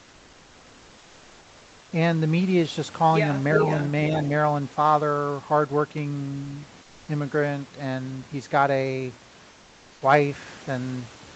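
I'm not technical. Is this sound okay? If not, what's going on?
No. There are two problems.

The first is an echo leak. At 3.54 to 3.91 s you can hear a delayed copy of the speech, fairly loud, arriving about 0.37 s after the original. At 4.29 s (from 4.23 s) a much fainter scrap of echo comes back with the same delay. The likely cause is that the other person is on a loudspeaker, and their echo canceller failed to remove what its microphone picked up. So it sent your own sound back.

The second is comfort noise in place of the background. From 9.51 to 10.01 s, half a second, the real room sound disappears. A smooth, even hiss takes its place, slightly quieter than before. Then normal sound returns. This likely happens because the sending side stopped transmitting during a pause. The receiving side then filled the gap with artificial noise shaped to resemble the room.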